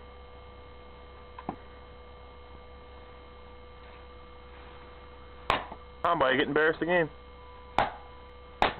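At 1.55, 3.8, 6.05 and 8.3 s the audio skips forward, losing around 300 ms each time, with no gap of silence at the joins. This is audio missing between chunks, likely from a recorder working in 2.5 s chunks and dropping material at each handover.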